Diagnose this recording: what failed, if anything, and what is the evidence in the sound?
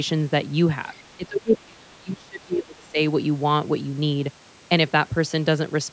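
The call's echo canceller likely let part of the loudspeaker signal through to the microphone. From 0.93 to 1.17 s, the other side's voice leaking through is audible as a very faint second voice sitting far below the talker's speech.

Immediately afterwards, from 1.17 to 2.99 s, the same call-processing stage likely could not separate the talker from the loudspeaker echo during double talk. It turned both down, so speech is suppressed in double talk, dipping deeply for about two seconds.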